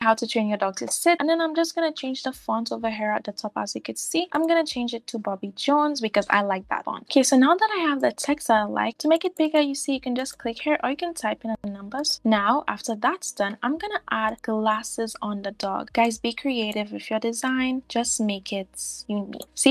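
No technical faults can be heard anywhere in the audio. Nothing in the recording or playback chain breaks into the sound at any point.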